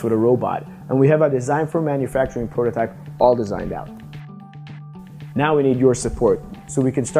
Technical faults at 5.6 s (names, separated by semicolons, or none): none